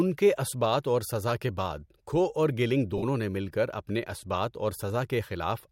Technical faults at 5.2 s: none

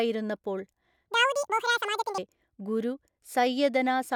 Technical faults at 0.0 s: none

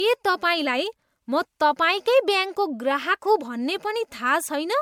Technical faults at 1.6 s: generation loss

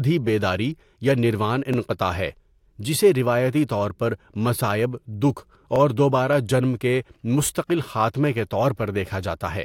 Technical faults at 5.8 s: overlapping chunks

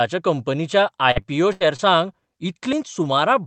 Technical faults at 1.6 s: repeated packet loss (robotic sound)

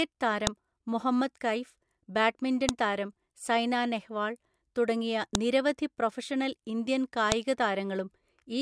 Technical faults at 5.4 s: file header played as audio

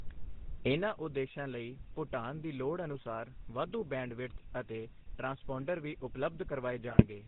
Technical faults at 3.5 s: GSM full-rate codec

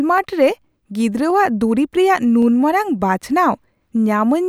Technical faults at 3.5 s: clock drift buffer slips

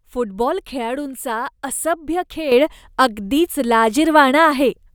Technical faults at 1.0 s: none

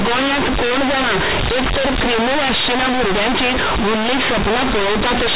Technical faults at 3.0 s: companded audio read as linear

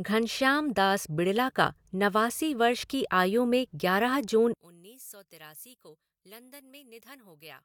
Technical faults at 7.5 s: one channel inverted

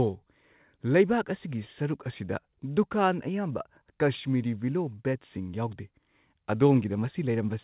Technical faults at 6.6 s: none

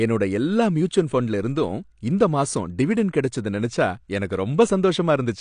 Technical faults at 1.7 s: AAC compression

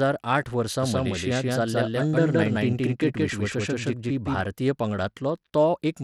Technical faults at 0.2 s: Bluetooth SBC compression

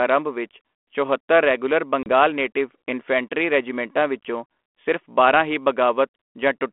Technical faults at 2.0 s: packet loss on an ADPCM call

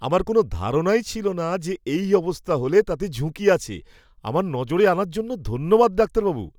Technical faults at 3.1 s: none

